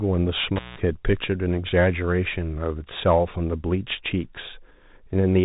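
The whole clip runs through a Bluetooth CVSD headset codec, and the damage is plainly audible. That one-bit up-or-down coding, which fits a 64 kbps link, cuts everything above about 3.8 kHz, so the speech sounds boxed in, with scratchy s sounds and a grainy hiss underneath.

At 0.56 s there's an intermittent contact, where a loose plug or cable briefly opens the line. The sound drops out for about 0.17 s, with crackle on either edge and only faint hiss in the gap, before coming back at 0.78 s.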